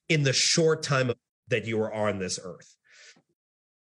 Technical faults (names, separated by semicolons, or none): compressed frames skipped